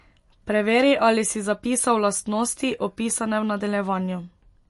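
MP3 compression throughout: nothing above 11.3 kHz and plainly watery, swirly speech, likely from an encoder starved of bits, which fits roughly 48 kbps.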